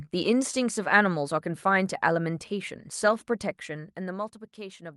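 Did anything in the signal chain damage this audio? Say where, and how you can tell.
Yes: from 3.4 to 4.37 s, zipper noise ticks over the speech as the level drops about 15 dB, in roughly thirty unsmoothed gain steps per second at the buffer stage.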